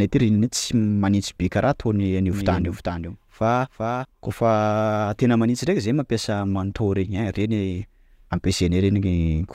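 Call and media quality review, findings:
Doubled audio track, 2.33–4.05 s: speech plays twice, a dry full-band copy trailing roughly 400 ms behind, about 5 dB down, cutting in and out abruptly. Likely a slower second capture path or out-of-step edit mixing in the late copy.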